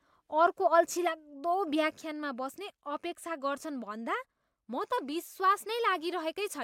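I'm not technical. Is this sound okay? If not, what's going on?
No. At 2.01 s, right after "अर्को अल्छिलाग्दो", there's a sudden gain jump. The speech drops to a clearly quieter level in an instant and stays there to the end, and the background noise drops with it. A speaker moving away would fade gradually and leave the background noise unchanged. The likely cause is a volume setting applied all at once.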